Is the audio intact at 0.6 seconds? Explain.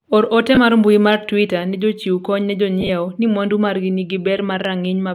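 No. Lost LE Audio frames hit the speech from 0.55 to 0.57 s, about 20 ms ending just before 0.6 s, which fits two 10 ms LC3 frames. With nothing arriving, the LC3 decoder filled the gap by repeating the last good spectrum with its signs randomised. That keeps the energy but scrambles the harmonic structure, so the sound turns briefly into a short noisy smear rather than a silent dropout.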